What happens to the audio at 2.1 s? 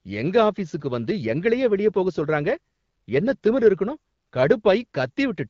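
At 2.1 s the speech runs on intact, with nothing breaking or dropping out, and it carries only the light coding character of the AMR wideband (HD Voice) codec working at 12.65 kbit/s.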